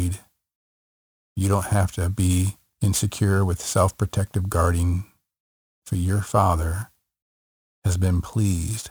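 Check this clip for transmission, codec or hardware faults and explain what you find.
There's one fault, and it runs the whole way through the speech. It's crude rate conversion: samples were just dropped or repeated, which fits a 48 kHz to 44.1 kHz change. That leaves an inharmonic fizz about 25 dB down, riding on louder, brighter sounds.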